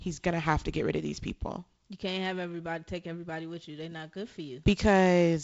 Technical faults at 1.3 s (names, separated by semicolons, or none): none